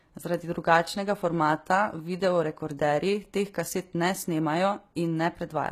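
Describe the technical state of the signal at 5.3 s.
At 5.3 s the speech carries the HE-AAC compression heard throughout, likely from low-bitrate coding: replicated treble sounds gritty on s sounds, and nothing reaches above 14.9 kHz.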